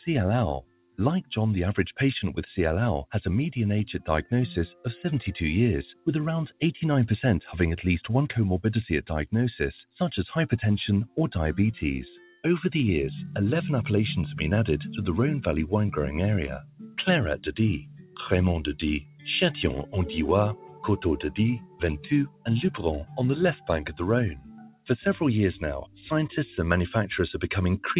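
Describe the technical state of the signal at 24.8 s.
At 24.8 s the signal sits at the very end of a stretch from 16.59 to 24.85 s where a sound was cut by the noise suppressor. The suppressor misjudged this material as noise and pulled it down harder than its surroundings, by about 18 dB at its deepest and for around three seconds in total across the span. Sustained and decaying content is hit hardest, so its level sinks and its tail is truncated, while sharper onsets still come through.

Underneath that, the noise suppressor is applied to music or sounds across the whole clip. Because it is tuned for speech, it treats steady tones, ambience and reverberant tails as noise and attenuates them, with gain swinging by around 10 dB. Transients largely pass while held sound is pushed down, giving an audible pumping and fluttering with a thinned-out body. This is all heard through a telephone-band path with nothing above 4 kHz, which fits G.711 mu-law coding.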